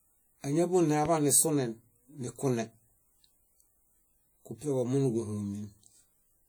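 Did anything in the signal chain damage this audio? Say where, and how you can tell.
Yes. At the codec stage, the speech was likely encoded with WMA compression at a low bitrate, consistent with about 48 kbps. The transform's quantisation noise smears across long blocks, so plainly audible ringing and a washy hiss that breathes with the speech run throughout, while content still reaches about 20.1 kHz.

Likely in the analogue wiring, a single loud pop sits from 1.05 to 1.08 s, just before "nisunen nikune". It peaks about 10 dB above the speech, a sharp transient that the following circuits shaped into a brief pop. The speech carries on underneath.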